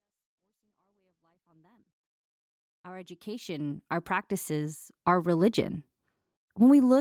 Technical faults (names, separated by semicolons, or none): none